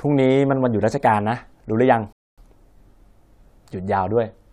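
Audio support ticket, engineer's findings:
Rebuffering stall, 2.13–2.38 s. Player buffer ran dry; playback halted until more data arrived. Speech cuts to silence for 0.25 s, then resumes exactly where it stopped. Nothing lost; 0.25 s added. Probable component: client playback buffer.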